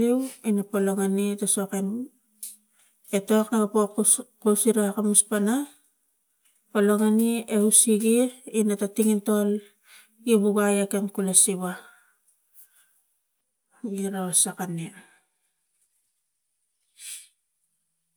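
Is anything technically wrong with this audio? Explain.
No, there is no technical fault to report in this speech recording.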